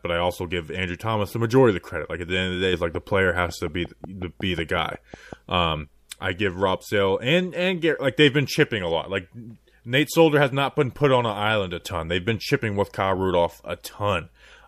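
From 2.95 s to 5.34 s, just after "the day it's like", a train of clicks sits over the speech: about fifteen near-identical pulses at a steady 5.47 per second, peaking roughly 5 dB above the programme level. The regular spacing and uniform shape point to a repeating external disturbance, likely interference from nearby equipment or a faulty connection or power supply, rather than anything in the source. It is heard as a brisk, even ticking that carries through the gaps between phrases as well.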